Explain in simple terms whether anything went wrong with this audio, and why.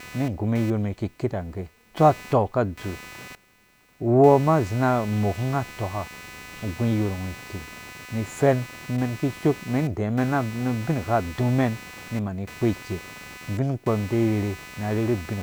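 Something did go wrong: computer activity noise runs under the speech for the whole clip. It's a buzzy, chirpy hum pulsing around 300 times a second, fairly quiet, caused by the computer's busy processor or graphics disturbing the audio circuit's shared ground.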